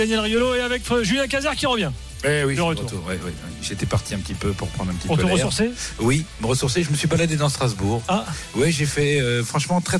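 The signal carries no audible technical faults at any point, with the audio holding steady and intact throughout.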